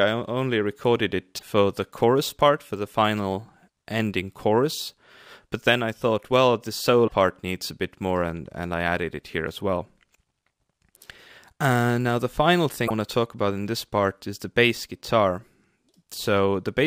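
A likely broken MP3 bit reservoir, with frames after cuts reading stale borrowed data, makes the sound skip ahead with brief glitches at 1.37–1.43 s, 7.07–7.12 s and 12.87–12.91 s, each lasting about one and a half to two 26 ms frames.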